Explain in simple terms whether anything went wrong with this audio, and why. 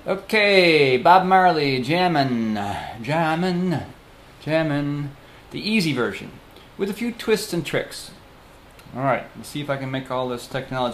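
Nothing went wrong here; no problems can be heard.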